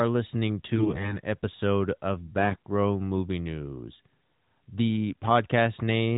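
From 0.76 to 1.20 s, just before "episode of", AMR bit errors break into the speech. Around one bit in ten in the weakly protected frame data arrives flipped. Pulse positions and fine pitch, gain and spectral values go wrong. The voice turns hoarse, scratchy and gargly over the narrowband AMR mobile sound.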